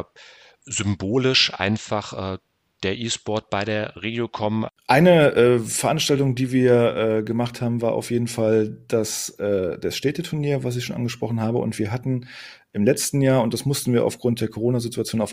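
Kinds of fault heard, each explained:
No technical faults can be heard in this recording.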